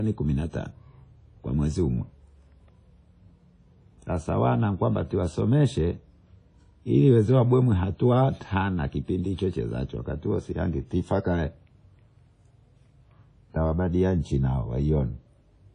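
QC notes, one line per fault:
Throughout, WMA compression: the speech has a ringing, washy edge, with a hiss that swells and fades along with the talking, and nothing comes through above 10 kHz. That's likely a low-rate WMA encode, and the plainly audible damage fits something around 32 kbps. The transform codec spreads its quantisation noise over long blocks, so it smears around each sound, and at that rate the weaker high detail gets thrown away entirely.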